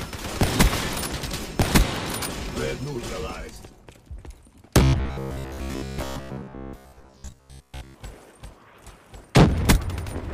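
From 4.83 to 7.95 s the sound turns into a rigid metallic buzz near 66.7 Hz: robotic sound from repeated short buffers, likely a starved stream looping 15 ms chunks most of the time. A spectrogram shows evenly spaced harmonic stripes; the waveform shows identical repeating cycles.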